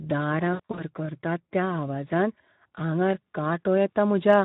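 Speech carrying plainly audible Speex codec damage from start to finish: the voice sounds hoarse and noisy, with the roughness pointing to a setting around 11 kbps. On a spectrogram the harmonics look smeared and grainy, and any energy above 4 kHz shows as a diffuse, noise-like wash. Between 0.53 and 0.83 s, VoIP packet loss concealed by the speech codec removes about 140 ms of audio spread over 240 ms, with the longest gap 60 ms. The decoder stretches its last pitch and filter into a buzzy tone or coloured noise that fades. The waveform shows short fading stretches, with weak or distorted speech just after.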